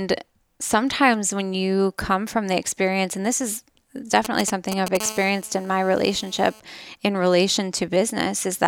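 From 4.25 to 4.97 s, GSM signalling bursts break into the speech. A nearby 2G phone is sending short groups of radio bursts, as it does while setting up a connection. The audio circuitry rectifies those pulses into sound. The result is a galloping dit-dit-dit of short buzzes. Each buzz repeats at 216.7 Hz, the GSM frame rate. These bursts come in nearly as loud as the speech itself.

At 5.00 s the pattern turns into a continuous GSM phone buzz, which lasts until 6.60 s. The phone is now transmitting steadily, as during a call, at 216.7 bursts per second. Rectified, that becomes a hard, raspy tone at 217 Hz with many harmonics stacked above it. It has no relation to the speech. It sits about 17 dB below the speech, so it is quieter than the bursts before it.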